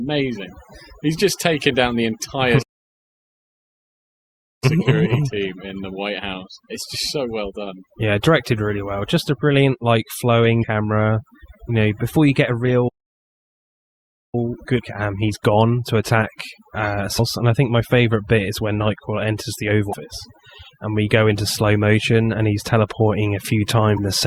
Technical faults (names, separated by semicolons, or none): overdone noise removal; playback stall; damaged data in a compressed stream